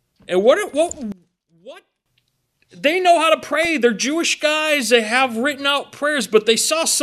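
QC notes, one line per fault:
1.12 to 2.06 s, one channel inverted. For just under a second the sound drops by about 22 dB and almost disappears. The background goes with it. What remains is a low residue rather than the full signal. The likely cause is one channel of a stereo source playing with reversed polarity. When the two channels are folded to mono, the content they share cancels. Only the small difference between them survives, which is why the level falls so far.
3.63 s and 5.65 to 5.76 s, DAB burbling. Two short bursts of bubbly, watery disturbance sit on the sound. The first is a single brief event. The second lasts about a tenth of a second. Bit errors at a low rate, around 0.1 percent, slipped past error correction into the coded audio. The damage hits individual frequency bands, producing blips or sudden band level jumps. The first burst fits roughly four damaged frames, the second roughly sixteen.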